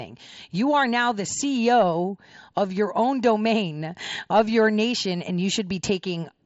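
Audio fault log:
No faults to log for this speech clip.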